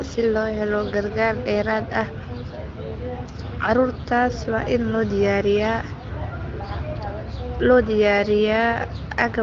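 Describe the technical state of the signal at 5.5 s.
At 5.5 s the speech is intact, carried cleanly by the AMR wideband (HD Voice) codec at 15.85 kbit/s with its usual ceiling near 7.4 kHz, and no fault is present.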